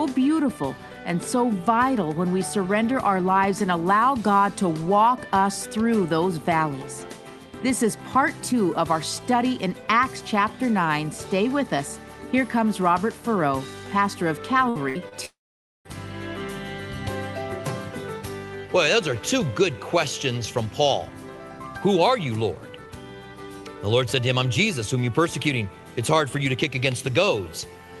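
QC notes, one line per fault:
14.69–14.77 s and 14.89–14.97 s: burst of packet loss. About 60 ms missing each time; the decoder extends the preceding sound, fades it, then resumes further along.
15.09–15.13 s: short concealed packet loss. Roughly 20 ms never arrived; the gap is patched by extrapolating the last sound and blending back, heard as a brief smear.
15.25–15.87 s: long network dropout. The sound fades to silence for about half a second, likely because about 600 ms of audio never arrived; playback resumes with that stretch missing.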